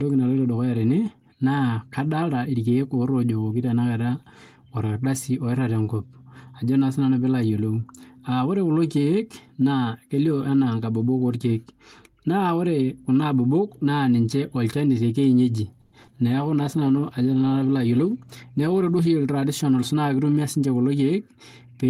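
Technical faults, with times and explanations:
15.81–15.94 s, call audio freeze: the sound stalls and is stretched into a fading buzz for about 110 ms, likely packets held up so the jitter buffer ran dry.
16.02 s and 16.07 s, short concealed packet loss: two brief smears where 20 and 40 ms of audio went missing and the decoder patched over it by extending what came before.
16.17–16.47 s, jitter buffer slow-down: the receiver repeats pitch periods to rebuild its reserve, adding about 45 ms, so speech drags at roughly 87% speed with unchanged pitch.
16.27–19.15 s, call bitrate drop: the encoder falls from 32 to 17 kbps, so the speech turns coarser and watery and muffled for nearly 3 s.
17.85–19.01 s, jitter buffer speed-up: short pitch-period chunks are cut to shed excess delay, roughly a tenth of a second overall, making speech about 10% faster and hurried.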